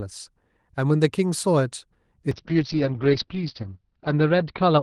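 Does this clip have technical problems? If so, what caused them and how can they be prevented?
Yes, there's a call bitrate drop from 2.33 s to the end at 4.83 s. The Opus encoder gets squeezed, and the top end falls from 12 kHz to 6 kHz, so the speech goes rough and muffled. It sounds like roughly 32 down to 7 kbps, bottoming out for about 1.1 s. To prevent it, keep the uplink uncongested or set a higher minimum bitrate floor.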